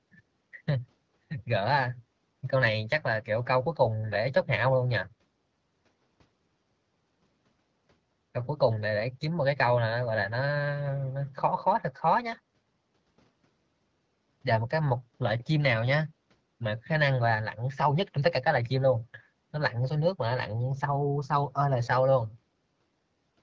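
No technical faults are audible.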